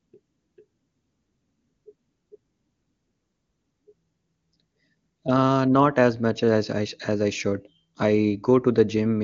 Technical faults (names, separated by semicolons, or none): none